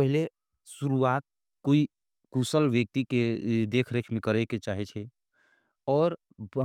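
A speech recording with CD scratch ticks: three brief clicks, each under a millisecond, between 3.51 and 3.96 s, spaced regularly at one per disc revolution, unlike random vinyl crackle.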